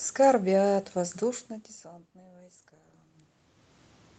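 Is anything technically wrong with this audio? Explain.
No, nothing technically wrong: the room's background noise and the level shifts near 1.0 s and 3.0 s, as the talker moves relative to the microphone, belong to the recording, and the call path's Opus coding, band-limited to about 8 kHz, behaves as expected.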